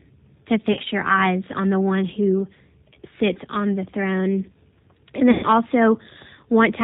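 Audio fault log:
Throughout: G.729 codec at 8 kbit/s. Nothing above 4 kHz passes, and pulse-coded excitation leaves a rough, slightly synthetic buzz rather than the smeary swirl of transform codecs.
0.73–0.80 s, 3.33–3.38 s, 5.31–5.48 s: VoIP packet loss concealed by the speech codec. Gaps of 40, 20 and 120 ms are filled with fading extrapolation of the voice, a buzzy tone or coloured noise rather than silence, and the sound stays weak or distorted afterwards.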